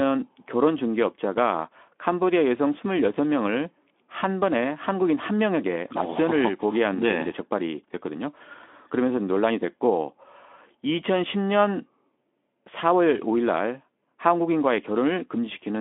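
Nothing in this speech recording stood out as a technical fault on listening.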